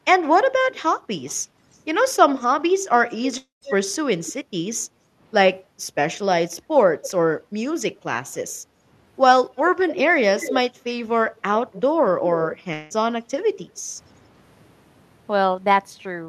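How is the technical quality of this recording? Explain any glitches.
The speech is marred by a recurring echo, two gaps in the audio and a brief dip in room sound.

Echo leak: a delayed repeat of the speech trails it by about 0.27 to 0.28 s, at 0.22–1.8 s, 2.38–2.46 s, 3.09–4.33 s, 7.04–7.08 s, 9.57–10.6 s and 11.36–12.57 s. It starts about 25 dB under the speech and grows to about 10 dB under. This is likely a loudspeaker echo the far end's canceller failed to remove.

Long network dropout: at 3.37–3.64 s the sound smears into a fading fill for about 0.24 s and then goes briefly silent. At 12.73–12.93 s there is a shorter fill with no silence. About 0.24 s and 0.18 s of audio are missing, likely because packets never arrived and the receiver papered over the gap.

Background gated by the echo canceller: between 4.89 and 5.78 s the room tone sinks by up to about 9 dB, for about 0.4 s in total, then recovers. 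The canceller clamped the microphone while the loudspeaker played.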